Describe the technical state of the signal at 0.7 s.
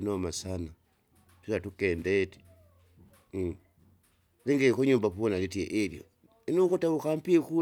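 At 0.7 s the audio is intact, with no dropout, distortion, glitch or other technical fault audible at that moment.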